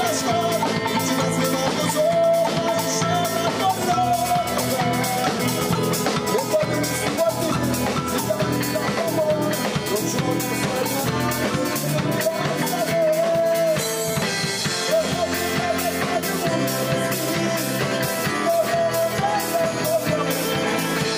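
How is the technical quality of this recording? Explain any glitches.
Nothing glitchy turns up here, so there's nothing to explain and you can just listen without bracing for a hiccup.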